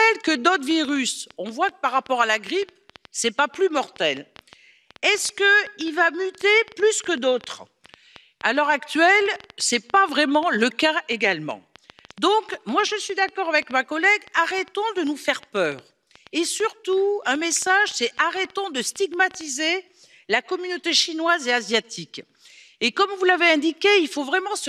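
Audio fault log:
0.08–19.70 s: train of clicks. About 6.4 uneven ticks per second, roughly 150, peaking a little above the sound. Likely nearby interference or a faulty connection.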